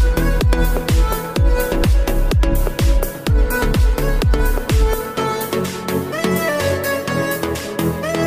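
No technical faults are audible.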